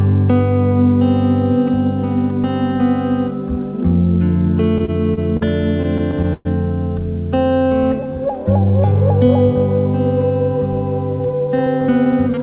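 From 4.78 to 5.43 s you get a run of repeated stalls, a proper stutter. The jitter buffer keeps running dry because packets show up late, so the receiver just holds the last bit of sound to cover four short gaps, the longest about 39 ms. That's 108 ms of filler in all, and nothing is actually lost. It sounds like the audio catching on itself for a beat.

It happens again from 5.83 to 6.47 s, and this time it's worse. There are five gaps totalling 161 ms, about a quarter of that stretch, and one of them is a 116 ms wait where the held sound fades down before playback picks up again. This one drags noticeably.

Then from 7.44 to 9.26 s there's a jitter buffer slow-down. The buffer is trying to rebuild its reserve, so it repeats tiny pitch-period-sized slices over and over, adding 166 ms. Playback runs at 91% speed with the pitch unchanged, so things sound drawn out, with a faint warble in places.

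Near the end, 11.19 to 12.38 s, it flips into a jitter buffer speed-up. Too much audio has piled up in the buffer, so the receiver trims out short pitch-period chunks, around 150 ms in total. That pushes playback to 110% at the same pitch, which comes across as a bit rushed.

Throughout, nothing reaches above 4 kHz, which points to a G.711 mu-law call path at 64 kbps.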